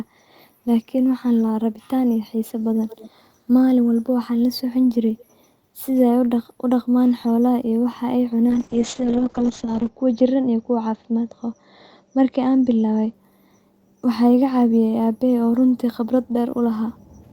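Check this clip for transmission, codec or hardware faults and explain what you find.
Two faults are audible: faint echo in two short stretches, and a spell of degraded coding in the middle of the clip.

Echo leak, 2.88 to 3.11 s and 5.18 to 5.25 s: a weak copy of the speech trails it by about 207 ms, well below the speech at first and fainter still the second time. The likely cause is a far-end loudspeaker whose echo canceller let some of the signal back. A fixed delay separates it from room reverberation.

Call bitrate drop, 8.51 to 13.19 s: the sound turns rough and muffled as high frequencies above 8 kHz vanish, down from a full 20 kHz. The coarseness points to the encoder falling from around 32 kbps to about 6 kbps, staying lowest for 1.38 s. Unlike packet loss, nothing drops out.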